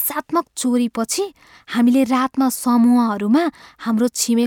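No technical faults can be heard anywhere in this speech recording. There is no moment in the audio that needs a timestamp.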